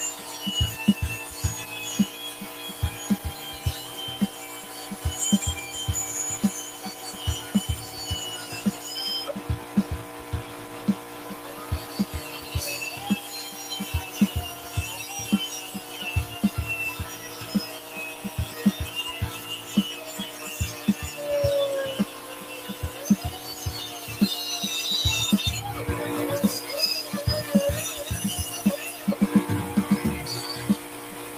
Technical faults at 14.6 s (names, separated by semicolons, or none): noise suppressor applied to music or sounds; sound cut by the noise suppressor